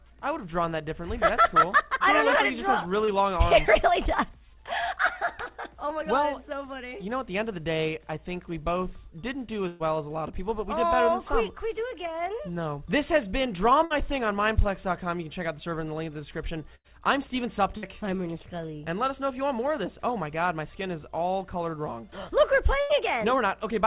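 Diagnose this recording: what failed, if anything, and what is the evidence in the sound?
Short concealed packet loss at 3.05 to 3.1 s, in the network: about 30 ms arrived too late, so the decoder extended the preceding sound, leaving a brief smear.

Bursts of packet loss at 9.68, 13.85, 16.75, 17.77 and 22.81 s, each 60 to 120 ms: the receiver held, then faded the last sound before resuming with audio missing.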